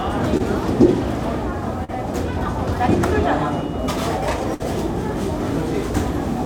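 Everyday sounds carry two short concealed packet losses, at 0.37 to 0.41 s and 1.84 to 1.90 s. Late packets were patched by extending the preceding sound, leaving brief smears of about 20 and 40 ms. At 4.54 to 4.62 s a burst of packet loss dropped about 60 ms. The fill decays into a fading tail before the audio resumes slightly further along.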